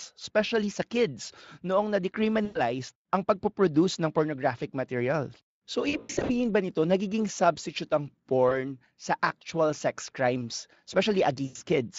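Speech carried over a Speex link, with only light coding roughness, and it drops out in four places from VoIP packet loss concealed by the speech codec: 2.45 to 2.6 s, 5.89 to 6.3 s (scattered gaps adding up to 280 ms), a brief blip at 8.49 s, and 11.45 to 11.62 s. At each gap the decoder stretches the last pitch and spectral shape into a buzzy tone or coloured noise that fades, and the voice stays thin for a moment afterward while the codec state recovers.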